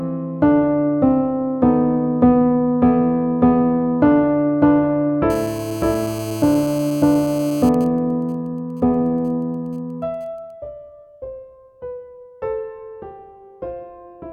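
From 5.30 to 7.69 s a GSM phone buzz sits about 18 dB below the sound: a hard, raspy 217 Hz tone dense with harmonics, from a 2G handset in a call whose transmit bursts the audio circuit rectifies. It is steady, unlike mains hum, which is smoother and lower.

From 7.74 to 10.51 s the buzz gives way to GSM signalling bursts, much fainter at roughly 30 dB down. A 2G phone in a call but with its user silent transmits only sparse groups of bursts, heard as even ticks with a longer 217 Hz buzz twice a second rather than a continuous tone.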